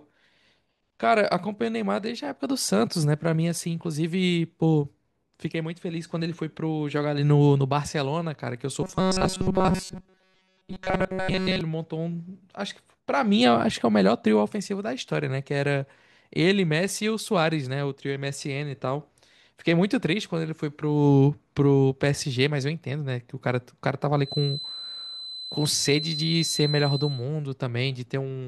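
From 8.82 to 11.61 s the speech goes robotic, a metallic 188 Hz buzz, likely from short buffers looping while most real audio gets skipped. Then, 24.21 to 27.28 s, there's a thin 4 kHz feedback whistle about 10 dB under the speech, likely a speaker-to-mic loop hovering at the edge.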